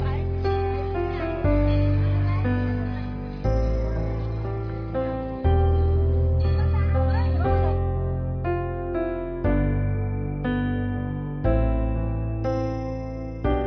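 Nothing here catches the ear as a technical problem: the audio runs along without any dropouts, glitches or other trouble worth pointing to.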